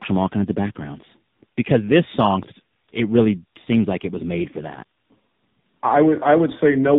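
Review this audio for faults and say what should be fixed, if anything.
The speech sounds rough, muffled and warbly from start to finish, with nothing above about 3.8 kHz. This is tandem speech coding. The signal appears to have passed through two speech codecs in a row, a CVSD-style delta-modulation stage and then an AMR-NB coder at a low rate, likely 6.7 kbit/s, with a G.711 A-law link between them. At each border the audio was decoded and coded again, so every coder worked on the previous one's degraded output. To prevent this, carry the call end to end in a single codec, or use transcoder-free operation so the speech is encoded only once.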